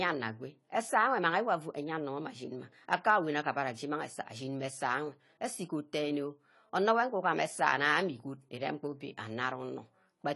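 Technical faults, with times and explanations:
Throughout, AAC compression: nothing above 11.5 kHz, plus smeared, warbling sibilants a clean low-pass lacks; likely AAC-LC at a low bitrate, consistent with 32 kbps.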